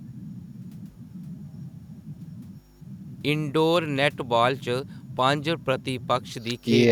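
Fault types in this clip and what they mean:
Nothing stood out on listening to this speech recording.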